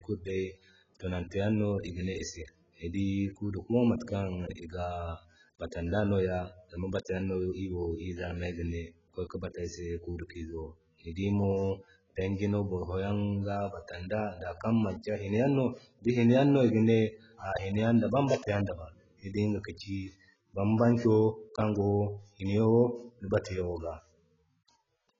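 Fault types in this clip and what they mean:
AAC compression: the speech sounds dull and smeared throughout, with a warbling, fizzy texture on sibilants and held sounds, likely from AAC-LC coding at a very low rate near 12 kbps. A spectrogram shows nothing above about 7.6 kHz.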